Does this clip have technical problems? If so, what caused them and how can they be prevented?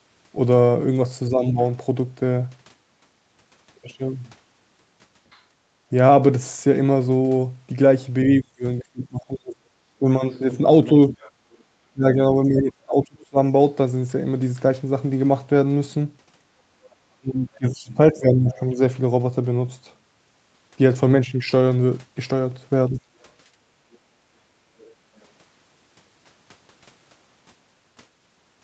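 Yes. Speech suppressed in double talk shows up at 1.3–1.59 s, 8.41–13.38 s, 17.19–18.79 s and 22.89–23.07 s. The talker dips by roughly 10 dB in the first spot and around 25–30 dB in the other three. That's likely the echo canceller ducking everything while both ends talked at once. A canceller with better double-talk detection, or a headset, would keep the talker intact.

The other side's voice leaking through appears at 5.32–5.41 s, 10.31–11.63 s, 17.55–18.6 s and 23.92–25.25 s. It's faint, roughly 30–35 dB under the talker. This is likely loudspeaker echo the canceller didn't fully remove from the mic. Lower speaker volume or headphones would stop it reaching the microphone.

Background gated by the echo canceller hits at 5.65–5.79 s, dropping about 13 dB, and within 23.52–24.54 s, about 11 dB. The room tone briefly sinks while the loudspeaker plays, because the canceller clamps the mic hard, then recovers. 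A gentler suppression setting, or less speaker-to-mic coupling, would avoid those holes.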